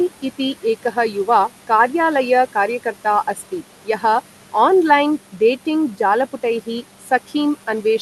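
Throughout the clip, noise suppressor artifacts shape the background. The suppressor pulls down the room noise by about 11 dB wherever it judges the band to be steady noise, so the noise dips between phrases and swells back under speech. On a spectrogram the noise floor looks patchy and flickering, with speckled residue.

From 7.01 to 7.1 s, the noise suppressor cut speech. It mistook part of the speech for noise and turned it down by as much as about 9 dB for roughly a tenth of a second, so that stretch sounds swallowed and faint. The waveform shows a brief sag in amplitude, and the spectrogram shows speech energy thinning out for that moment.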